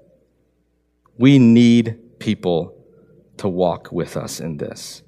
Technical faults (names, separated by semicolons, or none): none